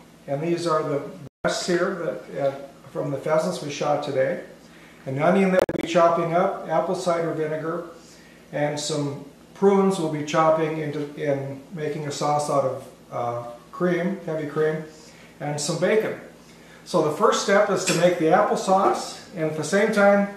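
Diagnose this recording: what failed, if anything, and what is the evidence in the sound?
Digital broadcast dropout at the reception stage: the sound mutes from 1.27 to 1.45 s, then breaks into several short holes between 5.59 and 5.84 s, the longest about 48 ms. The receiver silenced frames it couldn't decode, so that audio is gone.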